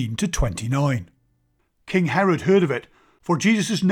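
No faults detected in the speech recording; nothing to report.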